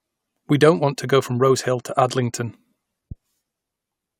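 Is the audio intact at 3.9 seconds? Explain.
Yes, the audio at 3.9 seconds is intact, with no fault present at that moment.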